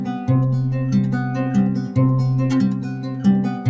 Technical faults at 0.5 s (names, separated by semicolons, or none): noise suppressor applied to music or sounds